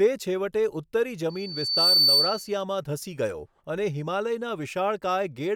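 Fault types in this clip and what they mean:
Loudspeaker feedback squeal: the microphone is catching the loudspeaker it drives, and around 4.5 kHz the loop gain climbs past one, so that frequency feeds on itself. After "છેવટે ઉત્તરી" a thin whistle appears at 1.29 s, swells over roughly half a second into a piercing squeal about 10 dB louder than the speech, and holds until 2.56 s, just before "ધસી ગયો અને".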